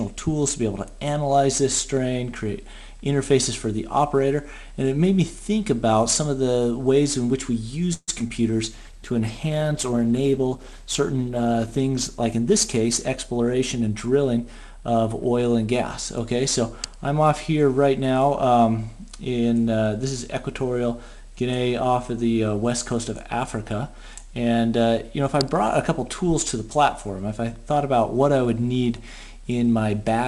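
At 7.93 s the sound stops moving forward. The last sound is stretched into a fading buzz for about 0.1 s, then goes silent for 40 ms before resuming at 8.10 s. This is a call audio freeze. Packets were likely delayed and the jitter buffer ran dry. The 143 ms gap is inserted, with nothing lost.

Two short concealed packet losses follow, at 8.20 to 8.22 s and 8.28 to 8.31 s. Each drops 20 ms of audio. The receiver patches the hole by extending the preceding sound. Each one is a brief smear or wobble.

From 8.73 s to 16.21 s there is a call bitrate drop. The encoder falls from 96 kbps to 14 kbps, staying at the floor for 2.81 s. Coarse coding and lost high frequencies make the sound muffled and watery until it recovers.

Between 12.07 s and 13.90 s, a jitter buffer speed-up overlaps the low-bitrate stretch. The buffer held more audio than it aims for. The receiver trimmed short pitch-period slices, removing about 150 ms. 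Playback runs at 107 percent, hurried but at unchanged pitch.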